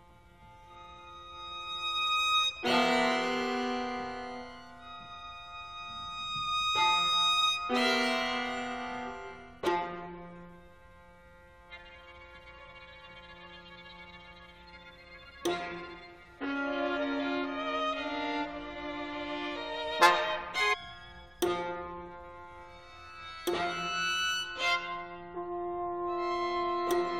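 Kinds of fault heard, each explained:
Stream segment skipped: at about 20.72 s the sound jumps abruptly forward with a brief blip lasting around 20 ms, the likely cause being a segment of the segmented stream that failed to load, so the player continued from the next one and that stretch of programme is missing.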